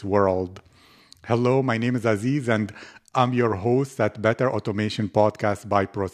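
No audible technical faults.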